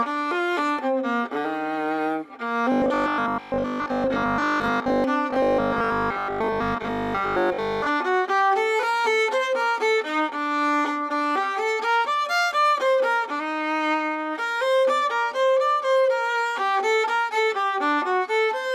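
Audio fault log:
2.72–5.04 s and 5.30–7.88 s, robotic sound from repeated short buffers: likely starved audio delivery, filled by looping a roughly 20 ms chunk, forcing a rigid 50 Hz metallic buzz.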